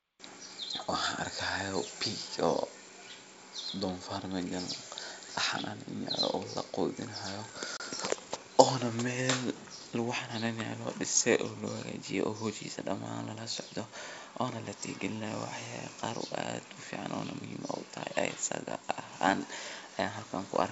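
At about 7.77 s, packet loss on an ADPCM call cuts a hard-edged silent hole of roughly 30 ms, around a few packets' worth, in the G.722 wideband speech. Unlike a plain dropout, the decoder's predictor and step size lose sync with the sender's, so the sound resumes briefly distorted before settling within tens of milliseconds.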